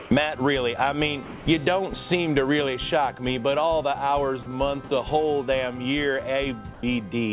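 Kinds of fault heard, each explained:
Sound dropped by the voice detector: Four times, the real sound gives way to a steady, featureless noise and then returns. This happens at 0.0 to 0.11 s, 1.25 to 1.46 s, 4.43 to 4.46 s and 4.88 to 4.91 s. The longest gap loses about 110 ms of actual sound. The likely cause is the sender's voice detector mistaking quiet sound for background and stopping transmission, with the receiver filling the gap with synthetic noise.
Comfort noise in place of the background: From 6.74 to 6.83 s, the real background is replaced by a smooth, even hiss. It lacks the texture of the surrounding background and sits about 4 dB lower. The background there is already about 21 dB below the loud passages. This is likely discontinuous transmission: the sender stops sending during a pause, and the receiver generates noise roughly matched to the background. As with the rest of the clip, nothing is heard above 4 kHz.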